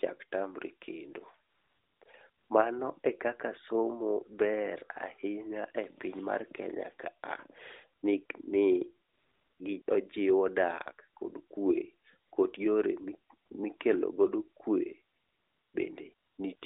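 AMR comfort noise appears thirteen times between 1.50 s and 16.62 s, in stretches from 20 ms to 600 ms. The longest are at 1.50–2.02 s, 9.08–9.60 s and 15.14–15.74 s. In each pause, the phone stopped sending speech frames and the receiver filled the gap with synthetic noise. The real background is replaced by a smooth, even hiss that switches in and out around the speech. This contrasts with the narrowband line, whose light coding fits a 12.2 kbps AMR mode.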